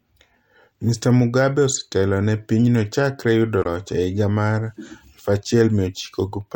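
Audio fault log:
3.59–3.66 s, damaged data in a compressed stream: right after "ne pinyno chakre yudo", a 70 ms glitch where the decoder misread corrupted frames and resynced.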